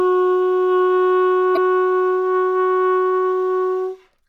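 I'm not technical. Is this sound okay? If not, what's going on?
No. From 1.53 to 1.58 s there is a brief chirp or blip caused by damaged data in a compressed stream. Part of the stored file is corrupted there, so the player misreads that stretch and briefly loses its place before picking up again.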